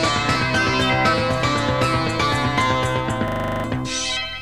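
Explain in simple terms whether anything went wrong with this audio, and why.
From 3.28 to 3.64 s, a 40 ms scrap repeats as a rattling buzz, 25 times a second: a system hang loop, where the computer froze while replaying its buffer.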